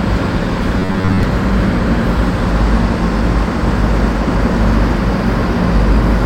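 From 0.79 to 1.23 s, robotic sound from repeated short buffers turns the sound into a rigid metallic buzz at 93.8 Hz. Audio likely arrived too seldom, so a 10.7 ms chunk replaced most of the signal. Spectrograms show evenly spaced harmonics; waveforms, identical repeating cycles.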